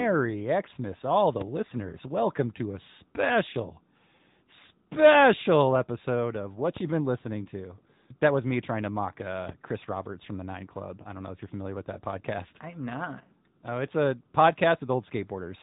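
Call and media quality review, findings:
AMR narrowband mobile codec throughout. Nothing above 3.8 kHz, plainly audible buzzy, synthetic speech. Vocal-tract model driven by pulses per subframe, which fits roughly 10.2 kbps AMR-NB.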